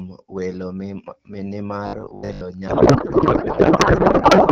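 From 1.87 to 2.43 s the speech takes on a rigid, metallic buzz at 50 Hz that still roughly tracks the syllables: robotic sound from repeated short buffers. The likely cause is audio arriving too seldom, with the playback side looping the last 20 ms to fill gaps, so about half of what is heard is repetition. Unlike a codec fault, the buzz pitch stays fixed.

At 2.67 s a codec payload misread begins and runs to the end. The AMR-WB stream, at 12.65 kbit/s with only light codec damage where it decodes correctly, is packed octet-aligned but read as bandwidth-efficient, so every field lands in the wrong place. The speech gives way to garbled noise and warble that barely follows it. Unlike the buffer repeats, there is no steady pitch.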